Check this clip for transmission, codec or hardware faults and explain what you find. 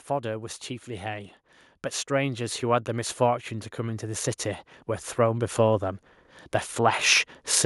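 There's one fault here, heard twice. Automatic gain rising: from 2.07 to 4.38 s and again from 5.15 to 7.08 s, the AGC hears quiet input and slowly pushes its gain up, by about 6 dB then about 5 dB, so speech and background swell together.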